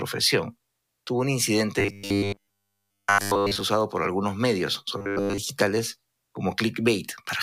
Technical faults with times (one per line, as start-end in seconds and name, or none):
1.79-3.60 robotic sound from repeated short buffers
4.98-5.38 robotic sound from repeated short buffers